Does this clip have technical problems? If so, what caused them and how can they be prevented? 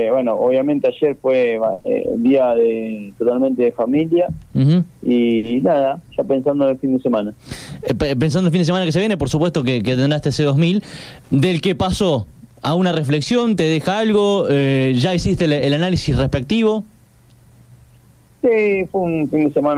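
Yes. Two short stalls from a late packet occur at 1.73 to 1.80 s and 5.37 to 5.45 s. Each time the jitter buffer ran dry and the receiver stretched the last sound by 50 ms and 60 ms, producing a held, slightly buzzy moment. A larger jitter buffer or a steadier network path would prevent them.

Immediately after the first stall, a short concealed packet loss at 1.80 to 1.86 s fills 40 ms of audio that never arrived. The decoder extrapolated from the preceding sound and blended back in, leaving a brief smear. Reducing packet loss on the link, or adding forward error correction, would prevent this.

From 14.27 to 14.68 s a jitter buffer speed-up plays the audio at about 110% speed. The receiver trimmed around 50 ms in small pitch-period pieces to reduce excess buffered delay, so the passage sounds hurried at unchanged pitch. Smoother packet delivery that avoids bursts of delayed arrivals would prevent it.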